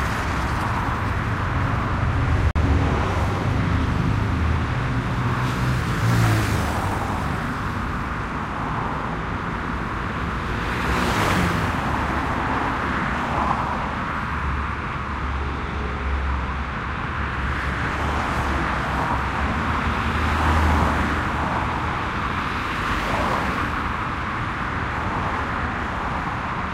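At 2.51 s the sound drops abruptly into a 60 ms hole, a corrupt frame muted: damaged compressed data got rejected and silence filled in, roughly two frames' worth.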